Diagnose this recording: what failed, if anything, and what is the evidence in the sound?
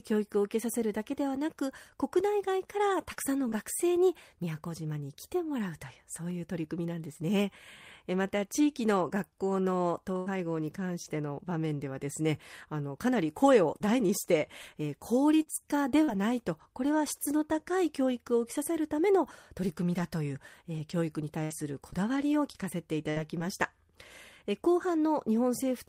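The network dropped packets here. First, short concealed packet loss at 3.13 to 3.19 s and again at 3.49 to 3.54 s: the receiver ran the last bit of speech forward for roughly 30 ms each time, so you hear a quick smear or tick before it blends back.

Right inside that second hole, 3.52 to 3.54 s, is a lost packet rebuilt from error correction. The next packet carried a low-bitrate copy, so there's no dropout, just a 20 ms patch that sounds rougher and grainier than what surrounds it.

Then there are two stretches of scattered short gaps, 10.18 to 16.10 s and 19.98 to 23.42 s. Each has about five separate losses, the longest around 70 ms, and each one was patched by extending the last sound. Expect little hiccups and ticks dotted across the speech.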